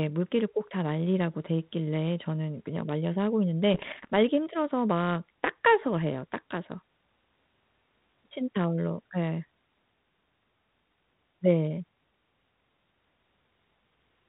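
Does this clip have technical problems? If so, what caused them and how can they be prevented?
Yes. Between 3.74 and 4.1 s there are bit errors on an ADPCM link. The audio breaks into pops and rough, crackly bursts with brief jumps in level. Each flipped bit also throws off the decoder's step size and predictor, so each error rings for a few milliseconds instead of clicking once. The error rate here is around one to two percent. A waveform would show spiky, irregular amplitude excursions, and a spectrogram would show broadband vertical smears reaching up to the 4 kHz ceiling of the 32 kbit/s G.726 channel. Better radio coverage or error protection on the link would prevent these errors.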